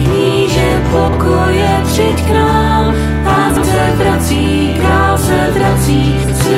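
Frames out of order at 1.08–1.17 s, 3.49–3.64 s and 6.23–6.33 s: adjacent blocks of about 46 ms, 70 ms and 46 ms were decoded swapped, giving a garbled flutter.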